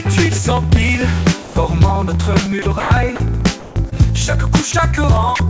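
Regular ticks run through the whole clip, from 0.07 s to the end, spaced 63 ms apart and heard only where there is signal. These are periodic USB or driver dropouts: something stalls the audio driver or bus at a fixed rate, and each time a sliver of audio is skipped outright rather than filled. Their strict clock-like spacing is what separates them from network faults, which land irregularly. Seven short gaps where the sound gives way to a steady noise floor and then returns are most likely sound dropped by the voice detector. The sender judged the signal to be background, and comfort noise was played instead. They fall at 1.42 to 1.56 s, 2.62 to 2.66 s, 2.80 to 2.90 s, 3.16 to 3.20 s, 3.60 to 3.76 s, 4.72 to 4.74 s and 5.36 to 5.40 s, lasting 20 to 160 ms. Unlike a dropout tick, each one is a smooth, noise-like stretch. At 3.90 s a brief smear of about 16 ms marks short concealed packet loss. 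Roughly 20 ms of audio arrived too late, and the receiver extended the preceding sound to bridge it before blending back. A voice-detector gap falls back to flat noise, but the concealment carries on the prior sound's character. Throughout, the audio stops at 8 kHz, which fits a G.722 call path at 64 kbps.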